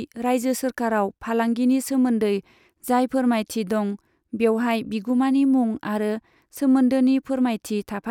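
No faults audible anywhere in the speech.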